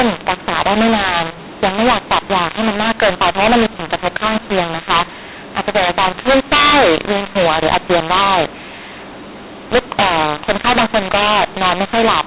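From start to finish the speech has a mu-law and A-law mix-up: it was coded as mu-law but decoded as A-law, so the levels are scrambled, some too large and others too small. The result sounds harsh and gritty, with pauses filled by hiss, over the narrow telephone band.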